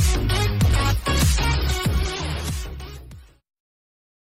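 No technical faults can be heard anywhere in the signal, which stays steady and intact throughout.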